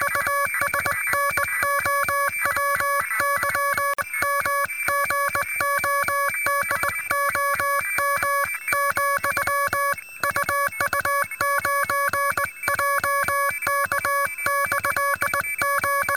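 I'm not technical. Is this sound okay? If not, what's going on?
No. At 3.94 to 3.98 s there's a gap at a join of encoded pieces: a gap of about 49 ms where two separately encoded sections meet, then the sound resumes.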